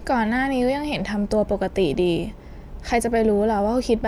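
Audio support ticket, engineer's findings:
No faults found in this speech audio; nothing to report for this ticket.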